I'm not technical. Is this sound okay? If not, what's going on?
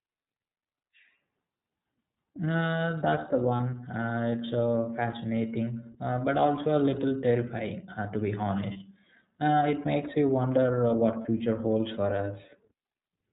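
No. The whole recording has passed through the iLBC codec, a phone-grade voice compressor. It removes everything above about 4 kHz, so the speech sounds narrow and muffled, with a plainly audible rough, slightly synthetic edge from squeezing the voice into small chunks.

There are also lost iLBC frames at 3.56, 8.72 and 11.21 seconds. Each time, about 30 ms of audio went missing, and the decoder filled the hole by repeating the last bit of voice with added noise. That makes a brief buzzy, held sound before the speech snaps straight back.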